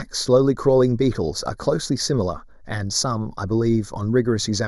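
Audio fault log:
Throughout: channel delay (comb filtering). One channel lags the other by roughly 0.2 ms, and the two are summed to mono. Cancellation leaves evenly spaced notches, the first near 3 kHz. The speech sounds hollow.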